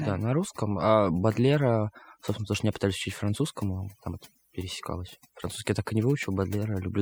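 Speech whose background has dropped and broken up into twinkling, warbling specks throughout the clip. This is overdone noise removal: a noise reducer set too aggressively cuts individual frequency bands whenever they approach its noise estimate, stripping away quieter parts of the voice along with the noise.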